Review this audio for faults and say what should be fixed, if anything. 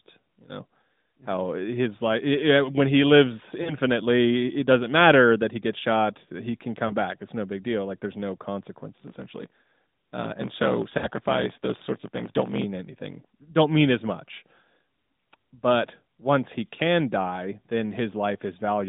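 Lost AMR speech frames cause brief dips and warbles at 3.62–3.76 s, just after "when he lives", and at 6.88–6.95 s. At 10.98–11.08 s a longer stretch sounds drawn out and weakening. There is a short dip at 16.76–16.80 s after "but once he". The lengths fit runs of one to three 20 ms frames that failed their checksum, where the decoder kept repeating the last good pitch and vocal-tract settings at falling gain. Better error protection or retransmission on the radio link would prevent these.

A block size mismatch (truncated) from 8.92 s to 12.64 s, between "there's no" and "anything don't mean as", adds a steady 50 Hz buzz. Speech runs about 1.16 times fast but keeps its timbre. One stage writes larger blocks, which fits 1024 samples, than the next reads, so every block's tail is dropped. Matching the block sizes on both sides of that interface would fix it.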